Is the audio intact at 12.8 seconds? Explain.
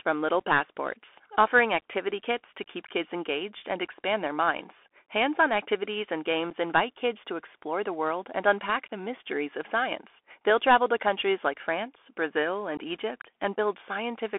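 No. At 12.77 s there is unconcealed Bluetooth headset packet loss: a couple of packets, about 15 ms of audio, were lost between headset and phone and nothing filled the gap, leaving an abrupt hole. This sits on top of the Bluetooth CVSD headset codec that runs throughout. Its 64 kbps one-bit-per-sample coding confines everything to a 300 Hz to 3.4 kHz band and adds granular hiss and scratchy s sounds.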